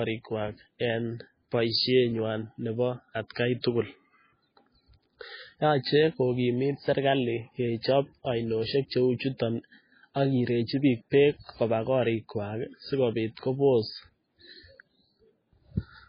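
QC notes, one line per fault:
Throughout, MP3 compression: nothing is heard above 5 kHz, and the speech sounds watery and swirly with smeared attacks. The likely cause is a very low bitrate, fitting roughly 16 kbps, that forced a fixed treble cut and dropped weak spectral lines.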